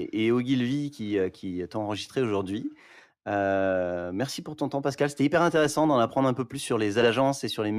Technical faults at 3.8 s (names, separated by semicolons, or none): none